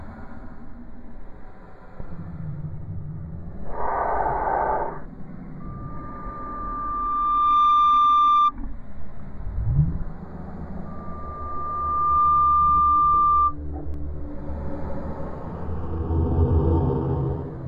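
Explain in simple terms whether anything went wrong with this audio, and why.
Twice, a loudspeaker feedback squeal breaks in: from 5.6 to 8.52 seconds, and again from 10.85 to 13.55 seconds. Both times a single high tone around 1.2 kHz swells up over roughly a couple of seconds (a bit quicker the second time) until it's ringing well above the rest of the sound. A microphone was picking up the very speaker it was feeding, and at that one pitch the loop kept amplifying itself.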